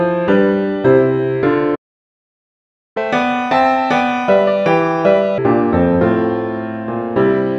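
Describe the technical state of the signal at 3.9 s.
At 3.9 s the audio is in catch-up at higher speed (2.97–5.38 s): a post-stall backlog replayed at 1.5× by resampling, pitch raised about seven semitones. Spectrogram harmonics shift upward and events compress in time.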